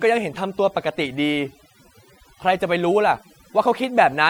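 From start to finish, the speech has the sound of overdone noise removal. A noise reducer was pushed too hard on a noisy recording, so any frequency band sitting close to its noise estimate gets pulled way down or shut off, and the softer parts of the voice get dragged out with the noise. You hear it as a near-silent background speckled with little twinkling blips.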